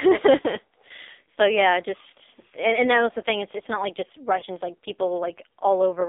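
A speech recording that has passed through an AMR narrowband mobile codec. Its sound is confined to roughly 250 Hz to 3.7 kHz, with nothing above 4 kHz. The voice is heavily buzzy and synthetic, which fits a low mode near 5.9 kbps. At 4.40 to 4.44 s there is a brief dip or warble from lost AMR speech frames. That fits a single 20 ms frame failing. The decoder bridged it by reusing the previous pitch and vocal tract settings at reduced gain, and the voice then resumes.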